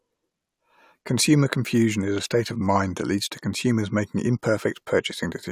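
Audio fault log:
No technical faults are audible anywhere in this speech recording, with no interruptions or disturbances.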